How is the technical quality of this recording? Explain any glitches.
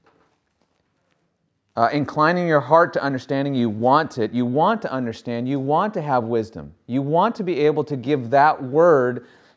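No technical faults can be heard in the recording, so there are no glitches to explain.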